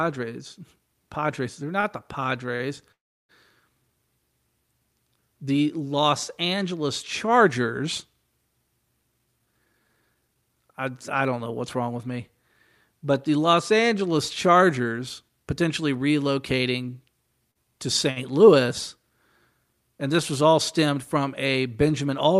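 Scattered short gaps run from 1.27 to 2.63 s: about four separate packets went missing or arrived late, the longest near 40 ms, roughly a tenth of a second in all. Each hole was patched by extending the preceding sound, leaving brief ticks and small smears across otherwise clear speech.

A call audio freeze follows at 2.92 to 3.32 s. The jitter buffer likely ran dry while packets were held up in transit. The last sound carries on for a moment and fades, then about 330 ms of silence opens before the speech resumes exactly where it paused, 372 ms later than it should.

Jitter buffer speed-up occurs from 9.12 to 10.81 s, ending just before "I don't know what's". Surplus queued audio was cut back by trimming short pitch-period slices repeatedly, about 300 ms in total. The speech plays about 16% fast at unchanged pitch and sounds hurried. A milder pass from 14.48 to 22.14 s runs only 2% fast, removing about 150 ms, which is barely noticeable.

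Short concealed packet loss at 17.51 to 17.58 s: a 40 ms piece of speech never reached the decoder in time. The receiver filled it with 37 ms extrapolated from the preceding sound and blended back into the real audio, producing a brief smear where that piece of speech is lost.

A short stall from a late packet at 18.11 to 18.19 s comes when the buffer empties for a moment. The preceding sound is stretched by 54 ms until the packet lands, then continues from the same point, so nothing is lost, but one sound is held slightly too long with a faint buzz or dip.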